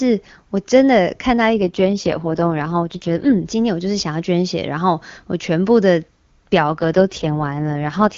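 AMR rate drops at 1.56 to 3.46 s and 6.57 s to the end: the speech turns raspy and synthetic with no gap or lost bandwidth, which points to the codec falling to its lowest wideband rates.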